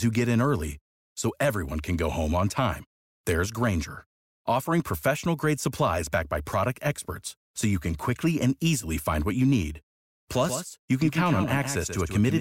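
At 10.44 s a doubled audio track begins and runs to the end. A second copy of the speech trails the first by about 150 ms, roughly 10 dB quieter. It enters abruptly, with no decay or room colour. A slower second capture path is the likely cause.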